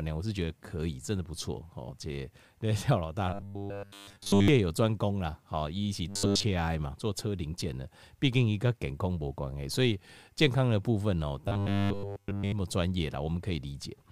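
Speech with robotic sound from repeated short buffers at 3.33–4.48 s, 6.08–6.43 s and 11.45–12.52 s: the voice becomes a rigid metallic buzz at 100 Hz, likely from a roughly 10 ms chunk being looped almost entirely in place of the real audio.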